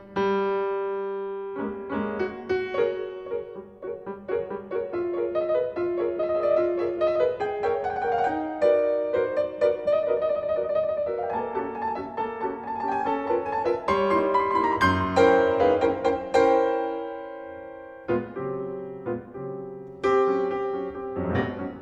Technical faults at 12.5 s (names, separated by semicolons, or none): none